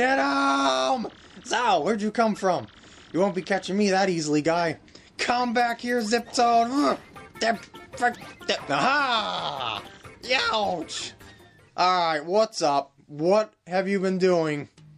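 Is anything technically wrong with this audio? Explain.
Yes. Two kinds of fault can be heard.

MP3 compression runs through the whole clip. The damage is plainly audible. The sound has a watery, swirling quality. Attacks smear. The likely cause is an MP3 encoder starved of bits, which fits a bitrate around 64 kbps. The encoder drops weak frequency lines, and they flicker on and off between frames.

Compressed frames are skipped at 8.14 s and again at 9.84 s. Each time the audio jumps ahead by about a tenth of a second. That fits roughly four compressed frames of 26.1 ms each going missing or being rejected by the decoder. Neighbouring frames overlap, so each join is a brief smeared blip, not a sharp click.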